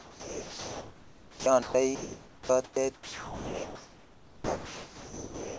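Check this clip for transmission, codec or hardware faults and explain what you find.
Yes, there are transmission faults: the sender's voice detector repeatedly gated the speech, so stretches of real sound were replaced by synthetic noise. The codec path caps the audio at 8 kHz, which fits G.722 at 64 kbps, and the room noise sits about 22 dB below the speech.

Sound dropped by the voice detector occurs from 0.00 to 1.46 s, from 1.62 to 1.74 s, and from 2.94 to 5.57 s. The detector likely judged real sound to be background and stopped sending, so the receiver played comfort noise instead. About 690 ms of sound is lost in the first stretch, 80 ms in the second and 1.41 s in the last. Each time, the speech gives way to a steady noise bed and returns only when the detector triggers again.

Comfort noise in place of the background fills 1.95 to 2.49 s and 2.64 to 2.76 s. During these pauses the sender likely transmitted nothing but occasional noise descriptions, and the receiver synthesised a matching hiss. 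The real background, sitting about 25 to 27 dB below the loudest speech, is swapped for a featureless, uniform noise. Its level barely changes, by about 1 dB at most, so the swap is heard as a loss of texture rather than a drop in volume.

An onset clipped by the voice detector occurs at 2.46 to 2.49 s, at the end of the first comfort-noise gap. The detector likely reacted late to the returning sound, so its first 30 ms were never sent and comfort noise covered them. The speech therefore starts abruptly, without its soft beginning, as if it were cut in mid-attack.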